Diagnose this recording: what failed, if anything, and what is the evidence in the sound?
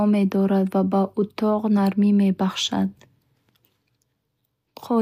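Nothing stood out on listening to this speech recording; no stage of the chain left anything audible that points to a failure.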